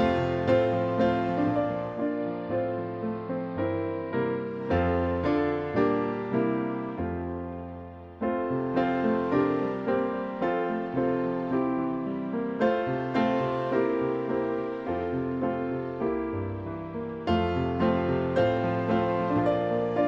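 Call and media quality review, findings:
Digital radio blending to analogue, 1.86 to 4.73 s. Treble cut; faint hiss roughly 40 dB down; level drops about 2 dB. Component: hybrid receiver. Digital signal lost, 0.41 s cross-fade to AM simulcast, then back.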